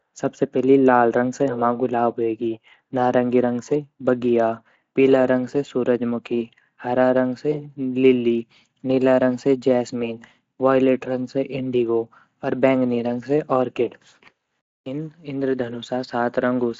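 It's a speech recording with nothing technically wrong to point to, and the Speex coding it passed through leaves the top end stopping at around 7.6 kHz.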